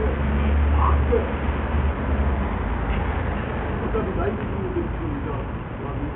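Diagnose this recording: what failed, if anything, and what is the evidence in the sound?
Codec stage: the treble flickers and drops out across the whole clip, with gritty noise riding along, which is likely Bluetooth SBC compression at a starved bitrate, around 48 kbps.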